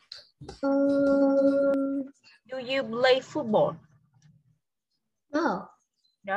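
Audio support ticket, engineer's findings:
Doubled audio track from the top of the clip to 1.74 s: a second full-band copy trailing about half a second behind, roughly as loud as the original, no decay or room colour, cutting off abruptly. Likely a slower second capture path or an out-of-step duplicate in the edit.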